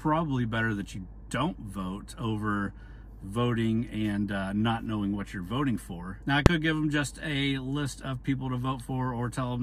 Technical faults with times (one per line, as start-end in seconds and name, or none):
6.46 corrupt frame decoded
8.79 corrupt frame decoded